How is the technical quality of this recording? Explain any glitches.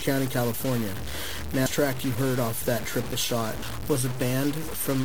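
Pretty rough, honestly. The speech is grainy from start to finish, and two short compressed-stream glitches pop up along the way.

The graininess sounds like low bit depth without dither, likely about 4 bits truncated. That error tracks the speech and sits only around 10 dB below it, so quiet bits fizz.

Then there's damaged data in a compressed stream at 1.66 s, right before "track you heard off", and again at 3.63 s, right after "heard off that triple". Each time the decoder hits corrupted frames, loses sync and hunts for the next header, which you hear as a brief blip.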